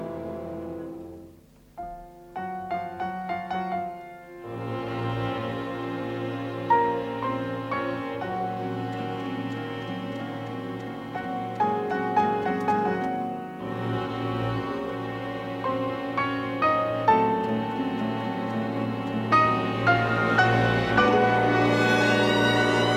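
No technical faults can be heard anywhere in this audio. Nothing interrupts or alters the sound at any point along its course.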